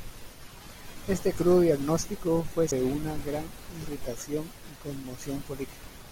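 At 2.71 s, between "crudo diagnóstico fue" and "una gran irritación", a CD skip occurs. The laser jumped tracks, so playback mutes for a few milliseconds with a tick and resumes elsewhere. The waveform shows a brief flat gap, and the spectrogram a thin vertical broadband line.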